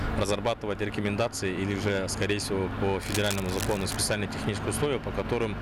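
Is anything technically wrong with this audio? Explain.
Yes. From 3.00 to 3.97 s there is cable scratch noise, dense uneven scratching roughly 10 dB below the sound, likely from a worn connector whose contact resistance fluctuated while moved.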